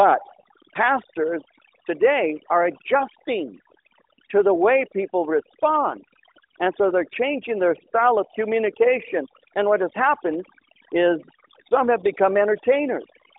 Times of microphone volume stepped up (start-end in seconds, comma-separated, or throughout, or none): none